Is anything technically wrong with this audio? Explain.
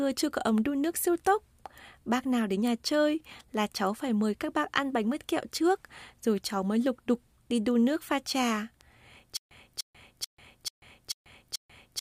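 Yes. From 9.37 s to the end of the speech clip there is a stutter with silent gaps. A fragment of about 298 ms repeats six times, each followed by roughly 140 ms of digital silence, so the burst returns every 437 ms at a steady rhythm. This pattern is likely a stalled player or stream retrying and replaying its last buffered piece before running dry. The speech that should have continued there never arrives.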